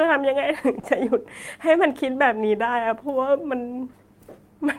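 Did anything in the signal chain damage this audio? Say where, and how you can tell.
Yes: at 0.79 to 0.85 s the speech briefly smears and wobbles, a short concealed packet loss at the network stage. About 40 ms of audio arrived too late to decode, so the receiver extended the preceding sound to fill the gap, then blended back into the real signal.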